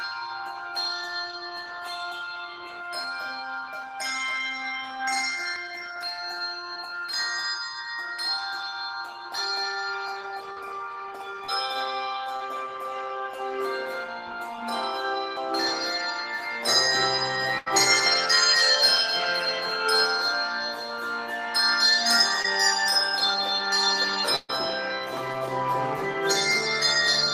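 At 5.56 s and again at 15.37 s the audio skips abruptly, with about a fifth of a second gone and the two sides butted together. The likely cause is audio missing between chunks in 10 s chunks. Short concealed packet loss at 6.73, 10.52, 11.44, 12.36 and 22.42 s covers 20 to 40 ms gaps by extending the preceding sound, heard as brief smears or wobbles. Bursts of packet loss at 17.58 to 17.68 s and 24.36 to 24.51 s replace about 80 and 120 ms with a fading continuation before the audio resumes further on.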